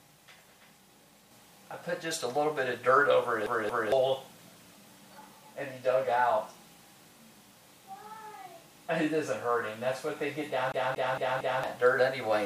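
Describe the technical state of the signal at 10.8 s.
At 10.8 s the signal is inside a CD stuck on one turn, running from 10.72 to 11.64 s. A scratch sends the pickup back a track each rotation, so the same 229 ms segment repeats four times, each jump marked by a brief mute: a fast, even stutter.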